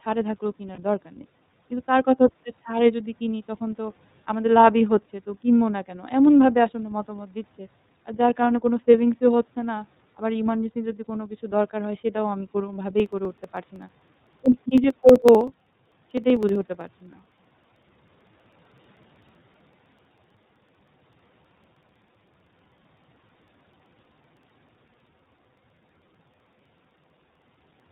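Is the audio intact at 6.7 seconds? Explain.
No. At 6.7 seconds, as across the whole clip, the speech passes through the iLBC codec, which fits its 13.33 kbps mode with 30 ms frames coded independently. Nothing above 4 kHz survives, and the voice has a plainly rough, synthetic edge that a simple low-pass filter would not add.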